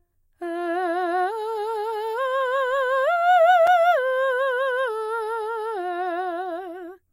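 At 3.67 s the music drops out for about 4 ms: a gap between stream segments, where mistimed segment boundaries leave a hard-edged silent hole.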